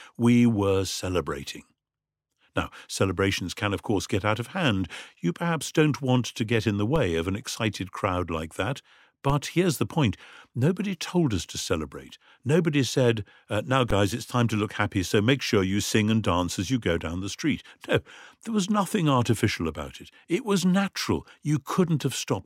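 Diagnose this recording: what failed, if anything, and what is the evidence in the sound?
Three DC steps point to the converter stage. Low thumps land at 6.96 s after "to get in the", 9.30 s after "excited crowd like that", and 13.91 s after "said uh now". The zero line jumps about -18 to -16 dBFS. A 20 Hz high-pass then drains each offset away.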